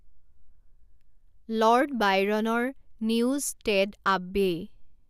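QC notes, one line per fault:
Nothing to flag here, the speech comes through with no technical faults to note.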